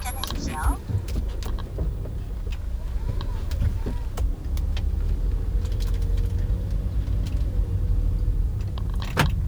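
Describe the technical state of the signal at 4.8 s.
At 4.8 s the audio carries grainy distortion that tracks the signal, gritty on quieter passages, with error sitting around 35 dB below the signal. It is present throughout the clip. The likely cause is low bit depth without dither, consistent with truncation to roughly 9 bits, leaving rounding error correlated with the waveform.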